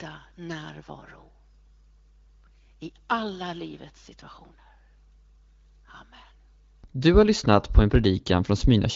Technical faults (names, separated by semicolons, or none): none